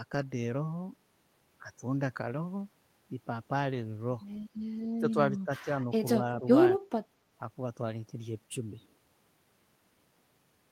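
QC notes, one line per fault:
4.99 to 5.17 s, 5.45 to 5.67 s and 6.4 to 6.45 s, speech suppressed in double talk: the speech dips by around 10 dB in the first two spots and more lightly in the third, likely because the echo canceller confused the talker with far-end echo during overlap and attenuated both.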